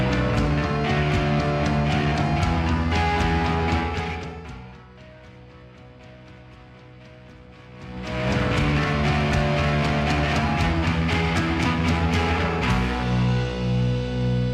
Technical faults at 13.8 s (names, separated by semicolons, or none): none